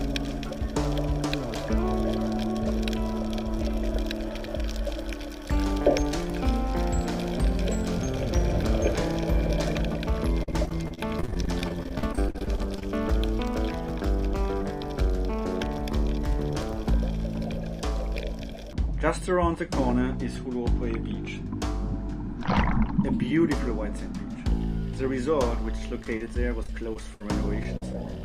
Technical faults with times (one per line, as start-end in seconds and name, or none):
10.43-12.83 repeated packet loss (robotic sound)
26.03-27.21 repeated packet loss (robotic sound)
27.63-27.94 short concealed packet loss